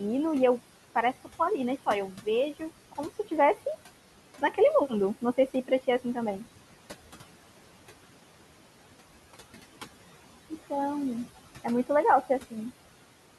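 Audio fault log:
throughout: noise suppressor artifacts. The suppressor pulls down every band it judges to be steady noise, working frame by frame, and takes the room noise down by about 17 dB. That noise, sitting about 16 dB below the speech, drops away in the gaps and comes back up beneath each phrase, so the background seems to pump in time with the talking.
2.09 to 2.27 s and 5.21 to 5.71 s: speech cut by the noise suppressor. In both spots the suppressor mistook quiet parts of the speech for noise and turned them down along with the background, by up to about 14 dB in the first and about 11 dB in the second. Only brief portions are hit, roughly 150 ms and 100 ms, so soft consonants or word endings there sound swallowed and faint rather than fully gone.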